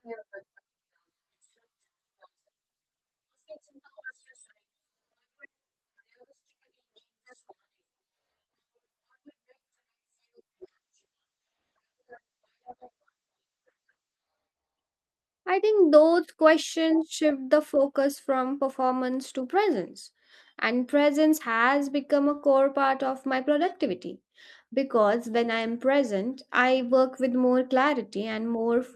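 From 10.62 to 14.35 s a call bitrate drop makes the speech rough, watery and muffled. The sound fits the encoder falling from about 48 kbps to about 10 kbps. A spectrogram shows the top band cut from 20 kHz to a flat ceiling at 8 kHz.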